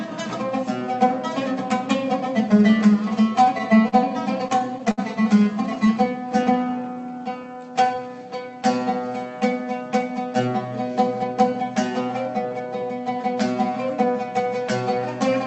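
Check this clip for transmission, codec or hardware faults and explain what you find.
Three kinds of jitter-buffer fault appear, all from packet timing rather than hardware, carried over what sounds like an Opus call path with an 8 kHz cut-off.

Repeated stalls (stutter), 3.45 to 3.94 s and 4.48 to 5.00 s: the buffer ran dry four times in each span, so the receiver stretched the last sound, up to 62 ms. The audio drags and stutters without losing content.

Jitter buffer slow-down, 5.85 to 8.04 s: to rebuild its reserve, the buffer repeated pitch periods, adding 175 ms. Playback runs at 92% speed with unchanged pitch and drawn-out sounds.

Jitter buffer speed-up, 10.03 to 12.90 s: with excess audio queued, the receiver trimmed short pitch-period pieces, roughly a fifth of a second in total. The sound runs at 106% speed, slightly hurried.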